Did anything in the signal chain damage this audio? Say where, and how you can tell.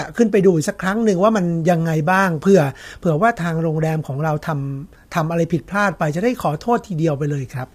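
Yes. Low-delay AAC compression runs throughout the speech, at the codec stage. The voice is plainly rough and grainy, with a noisy haze between the pitch harmonics and a top band that sounds dulled and partly synthetic. This pattern likely comes from AAC-ELD, whose very short frames resolve harmonics poorly and spend bits inefficiently. The damage level fits a bitrate around 32 kbps, where the coder cannot hold fine harmonic detail.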